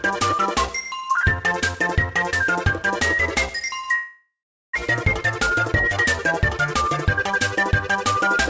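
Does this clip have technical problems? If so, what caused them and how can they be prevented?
Yes. A long network dropout runs from 3.95 to 4.76 s, likely caused by audio failing to arrive over the network for that stretch. The receiver covered the gap by continuing the last sound as a fading buzz or hiss that ends in about 410 ms of silence. Half a second of audio never plays, and the sound resumes further on. The delay also shifts by roughly 300 ms. A steadier connection with less congestion and loss would prevent it.

A jitter buffer speed-up follows at 5.38 to 5.98 s, running at 107% speed, and again at 6.57 to 8.37 s at 108%. Once audio resumed, the buffer held more than its target, so the receiver repeatedly cut short pitch-period-sized pieces to shrink the delay. It removed roughly 50 ms in the first stretch and 150 ms in the second, so the sound hurries along at unchanged pitch. 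The audio passed through a G.722 call path at 64 kbps, which leaves nothing above 8 kHz. Preventing the delay buildup behind the dropout, through a more stable network, would avoid this catch-up.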